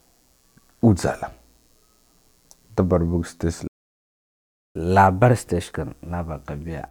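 Throughout the recording, computer activity noise sits far beneath the speech, roughly 45 dB down: a faint buzzing made of pulses at around 100 per second. It comes from processor or peripheral load currents disturbing the ground shared with the audio circuitry, so it follows the machine's activity rather than the speech.

At 3.67 s the speech cuts to silence in mid-flow. This playback stall lasts about 1.08 s, until 4.76 s. The player likely ran short of buffered data or had its output thread blocked, and nothing reached the output until it recovered.

From 4.76 s to the end, the player catches up at higher speed. It resamples its backlog at 1.1 times normal rate to recover the lost time, so the speech sounds hurried and sits roughly one and a half semitones sharp for the rest of the clip.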